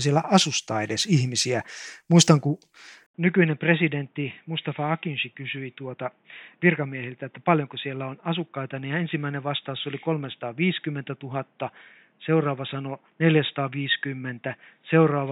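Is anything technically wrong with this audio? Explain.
Yes. At 3.06 s, after an 80 ms gap, the input was likely switched to a poorer device. Everything above 3.8 kHz vanishes, the level drops about 10 dB, and fresh background noise appears. A plain filter wouldn't change the level and noise as well.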